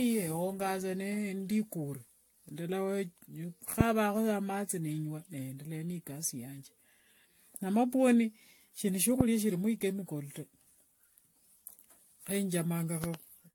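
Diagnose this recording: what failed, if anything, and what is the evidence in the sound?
Codec stage: generation loss, likely from around seven successive AAC re-encodes. The speech sounds swirly, smeared and hollow throughout, with nothing above 19.2 kHz and blurred attacks, worse than a single encode would explain.

Analogue wiring: loud pop at 9.21–9.23 s, about 20 dB above the speech, and a double pop at 13.04–13.17 s, about 15 dB up. This is likely a voltage transient. The speech continues underneath, unlike a dropout.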